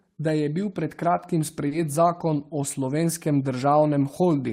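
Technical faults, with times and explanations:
1.67–1.73 s, short concealed packet loss: about 40 ms of the call arrived too late for the decoder, right after "je bil pred kratkim", so the receiver extended the preceding sound to fill the gap before rejoining at "zakon o", leaving a brief smeared wobble.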